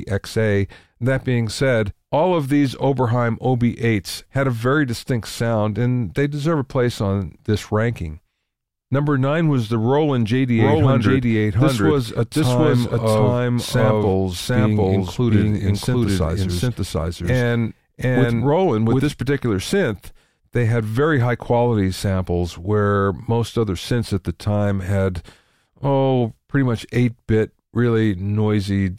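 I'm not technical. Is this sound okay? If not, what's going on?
No. From 10.6 to 19.1 s, a doubled audio track likely replays the speech a second time, as loud and roughly 0.7 seconds late, so everything sounds said twice.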